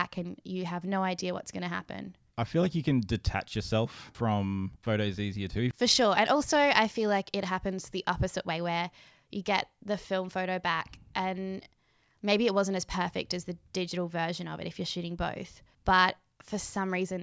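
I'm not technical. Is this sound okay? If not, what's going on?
Yes, no faults heard.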